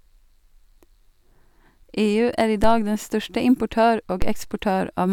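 The signal's zero line jumps by about -10 dBFS at 2.64 s and again at 4.22 s, each a DC step that then decays through a 2 Hz high-pass, heard as a low thump under the continuing speech.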